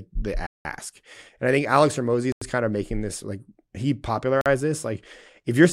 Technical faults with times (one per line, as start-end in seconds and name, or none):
0.46-0.65 block of digital silence
2.32-2.41 block of digital silence
4.41-4.46 block of digital silence